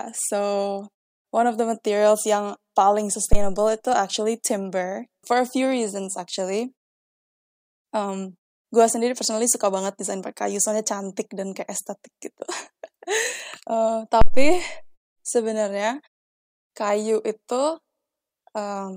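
A phantom power thump hits at 3.33 s, just before "itu actually timber for", and again at 14.21 s: a supply switching on a live input pushes a step through the coupling capacitors, so each is a deep thud. It decays in about 63 ms the first time and 112 ms the second. On the waveform each shows as a large low-frequency swing, and on the spectrogram as a dark burst at the bottom.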